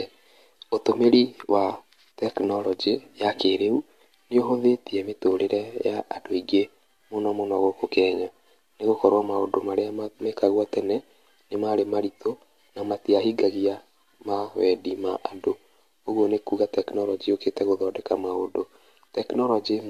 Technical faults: generation loss

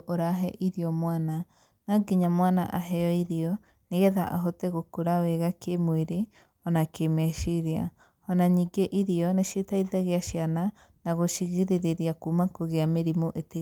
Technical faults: none

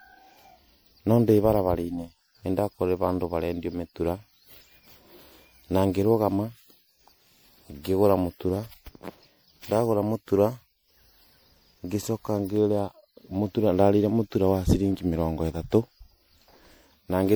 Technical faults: generation loss

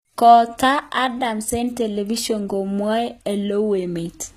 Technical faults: low-bitrate audio saved at a high bitrate

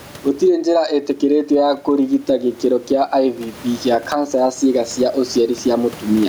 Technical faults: gain pumping

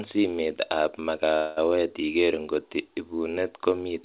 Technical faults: call audio freeze

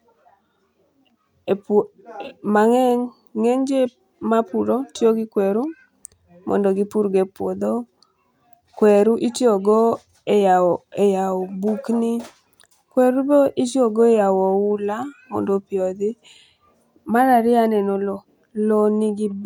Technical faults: none

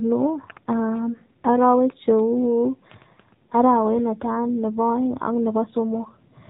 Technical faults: AMR narrowband mobile codec

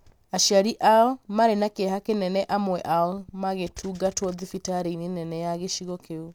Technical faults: none

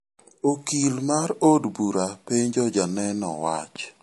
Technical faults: MP3 compression

